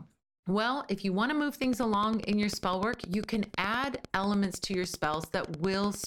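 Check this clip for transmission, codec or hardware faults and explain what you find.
One fault is present, a train of clicks. It starts at 1.64 s, right after "you want to move", and runs to 6.05 s. The clicks are evenly spaced at ten per second, around fifty in all. Each has much the same sharp shape. The peaks stand about 10 dB above the speech. They tick steadily through the pauses as well as over the words. The cause is likely interference from nearby equipment or a faulty connection or power supply injecting repeated pulses.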